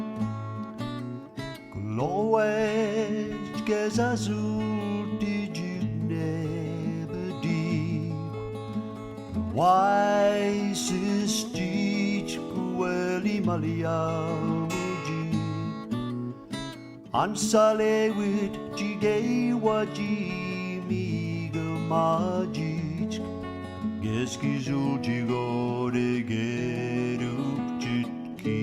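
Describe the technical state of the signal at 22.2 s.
At 22.2 s the signal is intact, with no audible fault at that moment.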